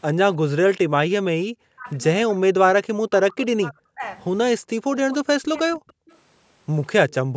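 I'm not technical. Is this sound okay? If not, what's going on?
No, there are a few call-related problems here.

First, speech suppressed in double talk. Between 1.48 and 1.98 s, 2.27 and 4.03 s, 4.58 and 4.88 s, and 5.04 and 5.94 s, the voice keeps dipping hard or dropping out in chunks. The longest stretch is the one from 2.27 s. This is likely the call's echo canceller getting confused when both people talked at once: it couldn't tell this person's voice apart from the other side coming out of the speaker, so it turned everything down.

Second, an echo leak. At 6.11 to 6.17 s and again at 7.09 to 7.14 s there's a brief, faint copy of the voice arriving about a third of a second late (311 ms). It's quiet and short, just a little ghost of what was said. The likely cause is a speakerphone on one end whose echo canceller didn't catch everything its microphone heard, so a scrap of the sound got sent back down the line.

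Third, background gated by the echo canceller. Right at the end, from 7.25 to 7.36 s, the room sound nearly vanishes for about a tenth of a second and then comes back. That's the echo canceller slamming the microphone almost shut while the loudspeaker was playing, then letting go again.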